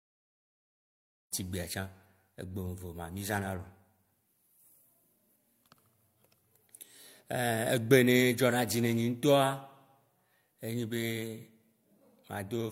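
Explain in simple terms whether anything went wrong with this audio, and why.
Nothing went wrong; the gentle fade-in at the start is intentional.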